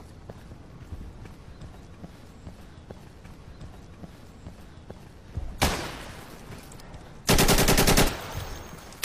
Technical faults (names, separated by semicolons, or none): stream segment repeated